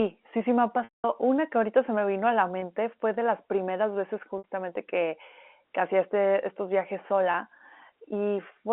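A 200 ms gap at 0.84–1.04 s, after "sí sí me ha", fades into silence before the speech cross-fades back. Shorter buzzy, held sounds follow at 2.60–2.62 s, 4.38–4.44 s (between "de las primeras veces" and "que que hacía este") and 7.32–7.34 s, after "hacía este estos viajes". This is packet loss with pitch repetition: the receiver loops the last pitch period to bridge missing packets over the telephone-band G.711 line.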